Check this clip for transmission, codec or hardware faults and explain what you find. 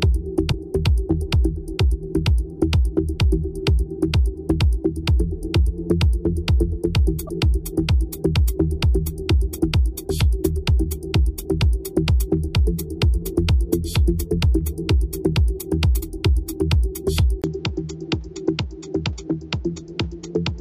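Two faults are present: four short bursts of damaged compressed data, and a late change to a poorer-sounding input.

Damaged data in a compressed stream occurs at 0.49–0.54 s, 7.27–7.30 s, 9.58 s and 15.98–16.03 s. Corrupted bytes make the decoder misread frames and resynchronise at the next header, giving brief chirps, clicks or short holes.

At 17.42 s the sound goes dull and boxy until the end, most likely because the input switched to a poorer device. A 20 ms silence marks the switch. Afterwards nothing passes above 7.6 kHz, the level is about 5 dB lower, and a new noise floor sits about 35 dB below the signal. The changed noise and the silence at the switch distinguish this from a simple EQ or filter change.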